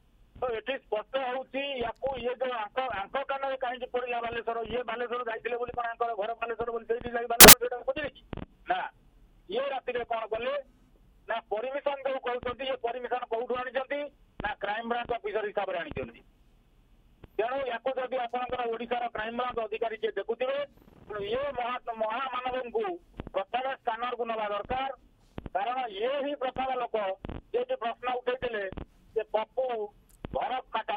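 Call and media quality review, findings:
Burst of loud broadband noise, 7.41 to 7.53 s, about 0.12 s. Samples built from the wrong bytes. Probable component: PCM reader or sample unpacking stage. Mechanism: bytes of each sample assembled in the wrong order or at a one-byte offset. Fast-changing low bits land in the most significant position. Result is loud, harsh broadband noise.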